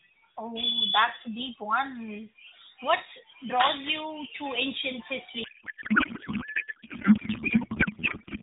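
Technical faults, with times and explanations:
5.44–8.42 s, codec payload misread: right after "draws you to ancient", the AMR narrowband speech turns to garbled warble, octet-aligned frames read as bandwidth-efficient; spectrogram shows smeared, unstructured energy below 4 kHz.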